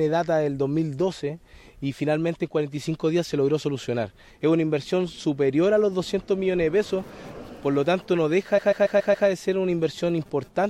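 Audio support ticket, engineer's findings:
Stutter at 8.57–9.27 s. The same 139 ms block plays five extra times. Repeated frames in the compressed stream, likely a writer or transport resend. The sound runs about 0.7 s long.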